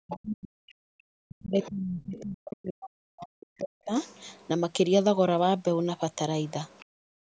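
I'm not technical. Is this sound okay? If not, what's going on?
No, there are a few call-related problems here.

First, speech suppressed in double talk. From the start to 0.87 s, and again from 1.27 to 3.93 s, the voice sinks, goes dull or breaks into pieces, at times almost vanishing. The likely cause is both people talking at once: the call's echo canceller couldn't tell the talker apart from the other person coming out of the loudspeaker, so it turned everything down.

Second, the other side's voice leaking through. Faint scraps of a second voice slip in at 0.11 to 0.16 s, 1.4 to 1.69 s, 2.17 to 2.22 s, 4.02 to 4.48 s and 6.47 to 6.85 s. They start out fairly noticeable and get fainter later on. This is likely the other person's voice playing from the speaker and getting picked up again by the microphone, because the echo canceller didn't scrub all of it out.

Third, background gated by the echo canceller. 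Right after that last scrap, from 6.85 s to the end, the room sound drops away sharply. While the loudspeaker was playing, the echo canceller clamped the microphone down hard. That cuts out the background along with the echo, and the gap lasts under half a second.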